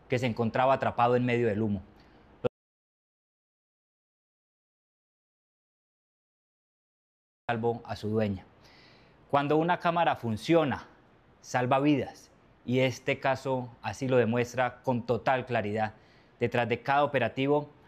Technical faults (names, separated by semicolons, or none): audio dropout to silence